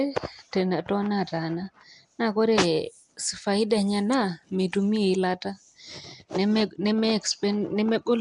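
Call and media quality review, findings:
Likely Nellymoser compression across the whole speech clip: fixed coarse bit allocation leaves weak bands unfunded and noise-filled. Result: plainly audible hissy halo, smeared underwater tone, nothing above 10.6 kHz. Damage level fits roughly 44 kbps.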